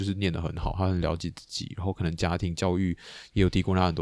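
A speech clip, and nothing is technically wrong with it.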